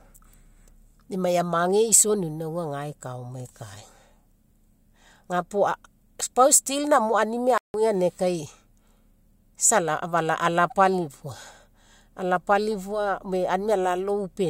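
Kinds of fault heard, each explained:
Playback stall: at 7.58 s the speech cuts to silence for about 165 ms, ending at 7.74 s, then resumes. This is likely the player starving for data or its thread being blocked, leaving the output with nothing to play until it recovered.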